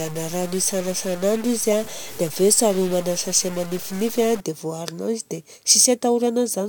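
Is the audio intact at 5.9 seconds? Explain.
Yes, the audio is intact at 5.9 seconds, with no audible fault at that moment.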